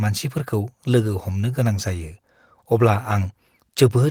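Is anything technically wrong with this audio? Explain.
No, nothing technically wrong stood out on listening to this speech recording.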